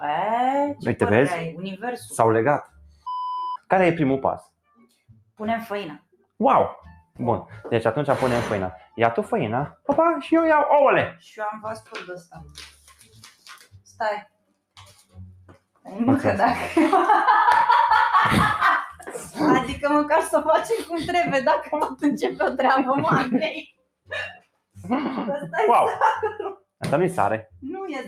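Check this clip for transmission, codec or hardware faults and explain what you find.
A speech-tuned noise suppressor was left running on material it was not built for. It treats sustained sound as noise, which causes two related faults.

Noise suppressor applied to music or sounds: Throughout the clip, the suppressor keeps judging steady tones, ambience and decaying tails as unwanted and pulling them down. Its gain moves by around 5 dB as it changes its mind. Onsets pass largely untouched while anything held sinks behind them, so the level pumps and flutters and the sound comes across thinner than it should.

Sound cut by the noise suppressor: At six points the suppressor clamps much harder. The spans are 2.64 to 3.06 s (about 15 dB down), 4.42 to 5.39 s (about 22 dB), 5.99 to 6.4 s (about 21 dB), 9.72 to 9.88 s (about 19 dB), 11.81 to 15.87 s (about 21 dB) and 23.66 to 24.77 s (about 21 dB). 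Here sustained or fading sound is classed as noise and pushed far below its surroundings, so tails are cut short and held passages dip audibly. The longest stretch lasts several seconds from 11.81 s.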